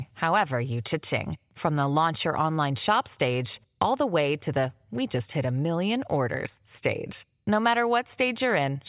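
No technical faults can be heard anywhere in the recording.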